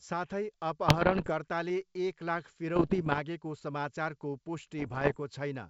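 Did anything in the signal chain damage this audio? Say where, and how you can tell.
Yes, bit errors on an ADPCM link in the network stage: pops and rough bursts with level jumps at 0.88–1.31 s, 2.76–3.19 s after "एक लाख", and 4.79–5.18 s. The bursts ring on because each error unsettles the decoder's step size. Packet loss would leave gaps instead.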